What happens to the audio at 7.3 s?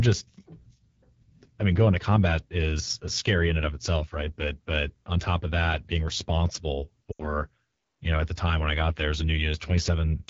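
Between 7.12 and 7.41 s, just after "of that being responsible", the speech drops to near silence and returns rough before "you know at the". These are lost AMR speech frames: about 80 ms failed on the radio link, which fits four 20 ms frames, and the decoder reused the last good settings at falling gain. Throughout, the sound is raspy and rough from the AMR wideband (HD Voice) codec running at 8.85 kbit/s, one of its lowest rates.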